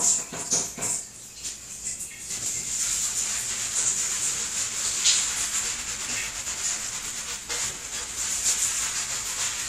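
A dull, gurgling graininess runs through the whole of this recording of sounds, with the top end thinned out and flickering in and out rather than staying steady. That points to the likely cause, MP2 compression at a low bitrate, one that fits about 80 kbps. MPEG Layer II divides the signal into 32 sub-bands and, when bits run short, drops the upper bands entirely while coarsely quantising the rest, giving this plainly audible murky, bubbling texture.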